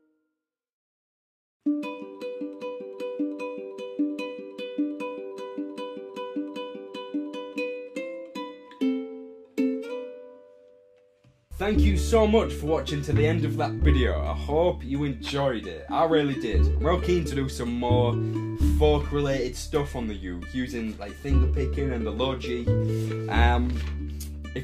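No technical faults can be heard anywhere in this recording.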